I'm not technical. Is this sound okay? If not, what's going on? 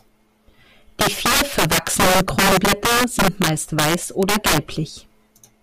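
No. Throughout this speech there is integer overflow: on the loudest moments the level runs past the highest number the system can store and flips to the opposite extreme. That makes harsh, violent cracks, much sharper than clipping, which only flattens peaks and sounds fuzzy.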